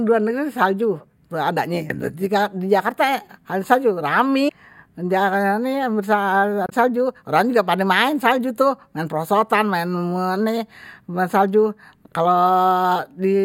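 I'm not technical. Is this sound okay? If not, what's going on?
No. There is damaged data in a compressed stream, heard as brief chirps or blips at 4.45–4.50 s and 6.66–6.73 s in the speech. Part of the file was corrupted there. The player misreads those bits and briefly loses its place.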